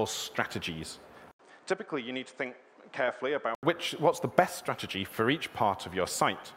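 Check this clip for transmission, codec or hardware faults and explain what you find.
One fault, lasting from 1.31 s to 3.63 s: the input likely switched to a poorer device partway through, then switched back. The replacement path passes nothing above 9 kHz, so the top end vanishes and the sound turns dull and boxy. It also arrives roughly 5 dB quieter, with its own background noise sitting only about 35 dB under the signal. An 80 ms gap of silence marks the changeover, before the original fuller, brighter sound returns.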